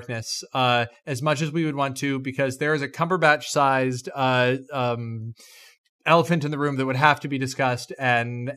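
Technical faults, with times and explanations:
No technical faults detected.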